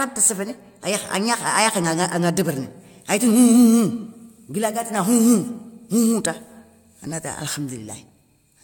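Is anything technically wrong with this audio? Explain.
Yes. Generation loss runs through the whole clip. The speech sounds swirly, smeared and hollow, with softened consonant attacks and nothing above 17 kHz. This likely comes from about three passes through a lossy codec. The sound fits AAC-LC near 96 kbit/s, each pass adding fresh noise.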